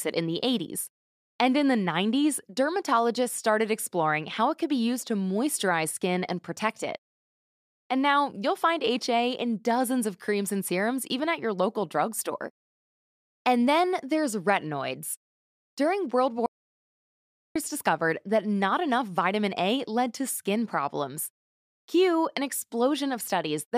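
At 16.46 s the speech stops dead and the track falls to complete silence until 17.56 s, when it resumes mid-flow on "discovered that not enough". This audio dropout to silence lasts about 1.09 s, with no room tone underneath. The likely cause is a lost input feed while the recorder kept writing silence. On a waveform the gap is a flat line; on a spectrogram it is a solid black band with hard vertical edges.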